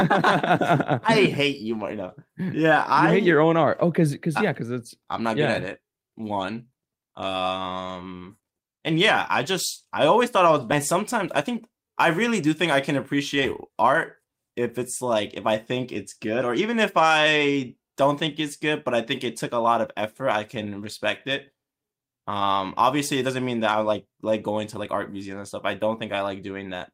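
At 10.71 s, just after "always thought I was", a skip ahead drops about a second of speech, joining both sides almost directly with no audible gap.

From 10.95 to 15.49 s, a jitter buffer speed-up trims short pitch-period pieces, running speech 5% faster at unchanged pitch, shedding about a fifth of a second before "think it's good or".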